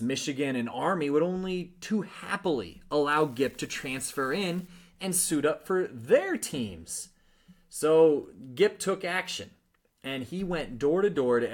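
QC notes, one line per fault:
3.12–4.68 s, unreliable data bit: between "would only too happily" and "and suit up for", one bit line in the sample path goes marginal and flips at random in some share of samples. Every flip adds or removes the same fixed step, about −42 dBFS, so the errors land as identical tiny spikes scattered unevenly in time. Together they form a steady crackling fizz that sits on top of the speech and carries on through the gaps.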